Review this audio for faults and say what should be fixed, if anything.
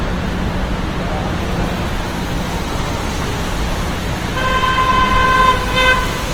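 Throughout the whole clip, the sound is grainy and rough, with tonal parts turned noisy. This is likely Opus compression in its music (CELT) mode, at a low rate that fits about 16 kbps. The encoder keeps each band's energy but, starved of bits, fills detail with folded or noise-like content. On a spectrogram, energy still reaches about 20.1 kHz with few holes, but harmonic lines blur into speckled, noisy texture. The waveform shows no visible defect. To prevent this, encode at a substantially higher Opus bitrate or keep a lossless master.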